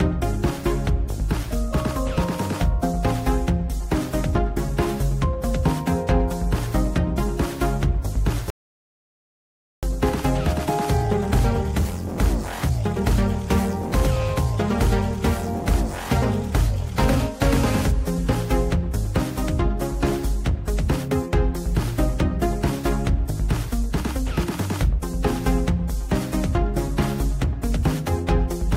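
At 8.5 s there's a rebuffering stall: the player ran dry of downloaded audio and just sat in silence until 9.83 s, then picked up exactly where it left off. Nothing's missing, but it adds about 1.33 s of dead air.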